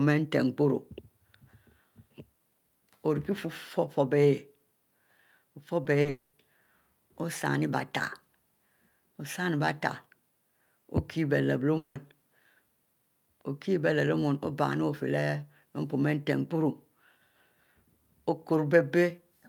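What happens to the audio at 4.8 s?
Nothing goes wrong at 4.8 s: the speech carries on intact through that moment, with no dropout, click, distortion or other fault to be heard.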